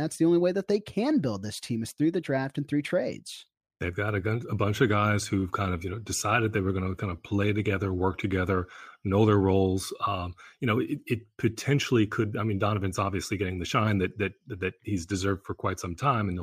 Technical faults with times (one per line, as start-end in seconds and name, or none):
none